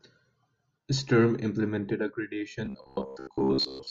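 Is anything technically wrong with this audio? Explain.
Yes. From 2.66 s to the end at 3.90 s, the speech turns robotic from repeated short buffers. It is likely caused by audio arriving too seldom, so a 15 ms chunk is replayed for most of that span. This imposes a rigid, metallic 66.7 Hz buzz.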